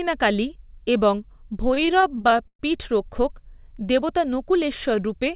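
Repeated stalls (stutter) run from 1.68 to 2.61 s, ending just before "পীঠরক্ষক দেবতা". Packets reached the receiver late, so its jitter buffer kept running dry, fourteen times in under a second, and each time the last sound was stretched to fill the wait, with the longest hold about 119 ms. Nothing is lost, but roughly 290 ms, about a third of that stretch, is filler, so the speech drags and judders. Throughout, the band stops at 4 kHz, which fits a narrowband call codec.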